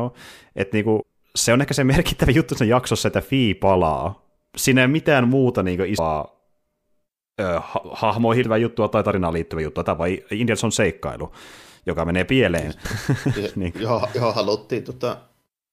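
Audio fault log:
1.01–12.84 s, compressed frames skipped: the speech jumps forward four times. At 1.01 s, between "niin kuin" and "se on ehkä se", and at 8.43 s, about 200 ms goes missing. At 5.97 s, after "ei mitään muuta niinku", and at 12.84 s, after "seikkailu joka menee pieleen", about 300 ms is lost. The losses fit whole 26.1 ms frames going unplayed. Because neighbouring frames overlap, each join is a brief smeared blip, not a hard click.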